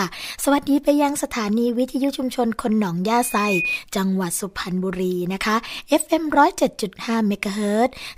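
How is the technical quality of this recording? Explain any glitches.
The recording has one clear glitch, a loudspeaker feedback squeal from 3.21 to 3.79 s. A microphone hears the loudspeaker it drives, and at 2.5 kHz the loop gain passes one. The tone swells over roughly a third of a second to about the speech level. On a spectrogram it appears as one bright horizontal line at 2.5 kHz, and the waveform's envelope grows steadily over its first 0.3 s.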